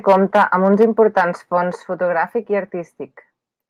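From 0.08 to 0.85 s the loudest syllables crackle harshly, likely microphone overload driving peaks about 5 dB past the converter's limit and flattening a small share of samples. At 0.83 s the level drops suddenly, likely the microphone volume stepped down by about 2 dB. From 1.17 to 1.22 s the brief crackle returns, peaks about 2 dB over, likely overload again. At 1.83 s, just before "fotogràfic i", another abrupt drop of about 4 dB is likely a further step-down.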